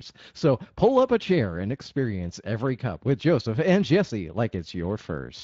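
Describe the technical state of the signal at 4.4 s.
At 4.4 s the speech has a hoarse, grainy roughness, with a noisy buzz riding on it. This is Speex codec damage, present for the whole clip rather than only at this moment. Speex is a CELP coder that rebuilds speech from a predicted spectral shape plus a coded excitation. Here the excitation is too coarsely coded to sound clean, which fits a bitrate around 21 kbps.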